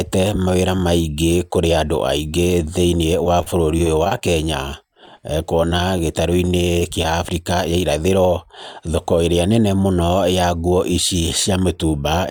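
From 3.24 to 4.21 s the speech breaks up with repeated packet loss, giving a robotic sound. Packets went missing in quick succession, and the receiver filled each hole by stretching the last bit of audio. The holes come too close together to recover between them, so the voice turns choppy and robotic. About 70 ms of real audio is lost, the longest hole is about 27 ms, and patched sound covers a tenth of the stretch.

From 4.94 to 7.05 s there are scattered short gaps instead: around ten isolated losses, each patched the same way, together hiding about 60 ms of audio. What separates this from the earlier stretch is spacing and size. The holes are shorter, the longest about 15 ms, and spread over a longer span, so patching covers only a small share. The voice stays clear between brief ticks and hiccups instead of turning robotic.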